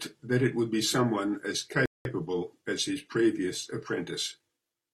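At 1.86 s the speech drops into a rebuffering stall: playback starved of data, went silent for about 0.2 s, then resumed right where it left off.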